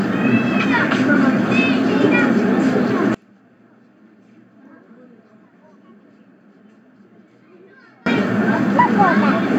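From about 3.15 s to 8.06 s the sound drops by roughly 33 dB and turns faint. That's likely one channel inverted: with one side's polarity flipped, everything common to both sides cancels when summed, leaving just their small difference.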